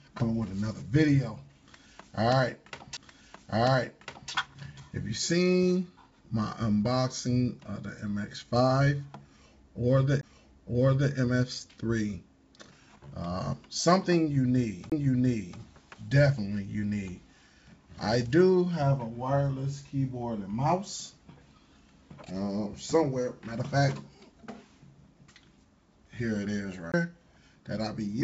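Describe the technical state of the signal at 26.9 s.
At 26.92 to 26.94 s there is a CD skip. The laser jumped to a different turn of the disc's spiral, so the player muted for around 20 ms and resumed from another point. It sounds like a tick followed by an abrupt jump in the material. On a waveform it shows as a brief flat gap with a discontinuous edge on either side. A spectrogram shows a thin vertical stripe, and the texture on each side does not line up.

This moment also falls inside the repeated timing corrections that run from 0.08 s to the end. The sender's clock is running roughly 4% fast, a clock drift between sender and receiver. The receiver holds the stream at 104% speed by cutting short pieces, always in the same direction but at uneven spacing. These cuts are heard, if at all, as faint hiccups or a slightly unsteady pace. On a waveform they are tiny splice points, and on a spectrogram they are small breaks in otherwise continuous bands. 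Through the G.722 call path, the spectrogram also shows nothing above 8 kHz.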